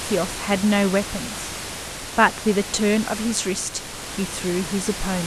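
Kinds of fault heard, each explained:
No kinds of fault are heard in this speech clip.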